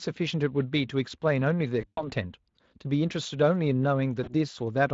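From 1.81 to 2.04 s, and again from 4.23 to 4.33 s, VoIP packet loss concealed by the speech codec stretches the last speech into a fading buzzy tone or coloured noise before the Speex stream recovers.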